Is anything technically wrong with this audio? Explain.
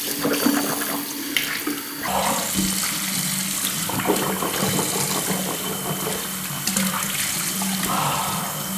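Yes. From 2.08 s to the end, a wrong sample rate: audio recorded around 48 kHz plays back at 32 kHz, so everything runs at two-thirds speed and drops about 7 semitones.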